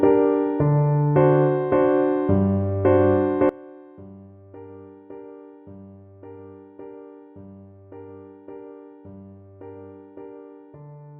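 From 3.49 s to the end, the audio collapses to a faint remnant about 23 dB quieter, with its centred content and low end nearly gone. The likely cause is one channel inverted: reversed polarity on one side cancels everything common to both channels when summed to mono.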